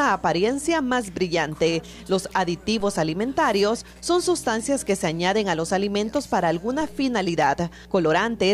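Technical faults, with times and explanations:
2.80 s and 6.81 s, DC step: the waveform's zero line jumps by about -31 dBFS, then drains away through a 2 Hz high-pass, leaving a low thump each time.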